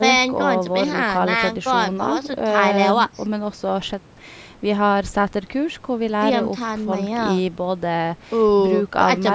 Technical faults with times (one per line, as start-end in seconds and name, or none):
none